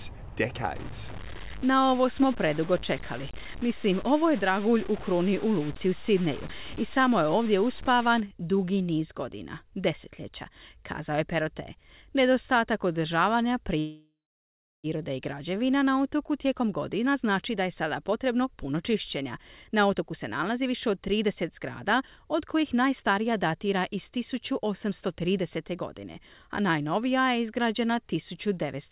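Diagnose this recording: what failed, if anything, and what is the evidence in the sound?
From 0.76 to 8.20 s, before "dugi niz godina desetljeća", speech turns gritty, noise about 15 dB below signal: low bit depth without dither, likely 5-bit truncation at sample-format conversion.

At 13.79 s the sound stretches into a fading buzz, then 0.66 s silence, resuming at 14.87 s with nothing lost: a call audio freeze, likely from delayed network packets.

After "na otoku", from 16.45 to 27.02 s, speech runs hurried at 110% speed with unchanged pitch: a jitter buffer speed-up trimming roughly a second of pitch periods.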